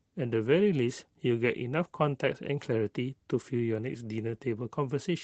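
No technical faults can be heard in this speech clip.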